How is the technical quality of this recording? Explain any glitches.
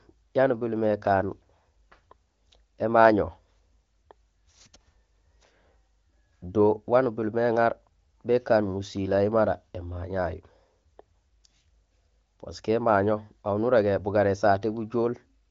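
No glitches turn up anywhere in this speech recording; it has the band-limited sound of an AMR wideband (HD Voice) call, with nothing above about 7.3 kHz.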